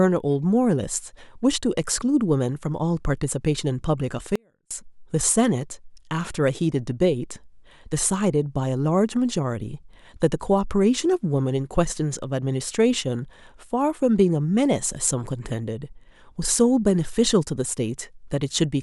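Speech with an audio dropout to a faint residue, 4.36–4.71 s: the waveform abruptly shrinks to a thin trace about 40 dB down, leaving a near-blank spectrogram band, likely from momentary signal loss.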